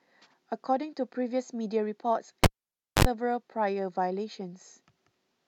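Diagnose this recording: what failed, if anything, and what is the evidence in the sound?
A pop at 2.44 s drops the speech to near silence for about 0.56 s, then a 56 ms burst of 50 Hz mains buzz and a second pop bring it back by 3.05 s. That is a cable pulled and plugged in at the analogue wiring stage: the live lead was withdrawn, and the plug tip touched alone and picked up hum before full contact resumed.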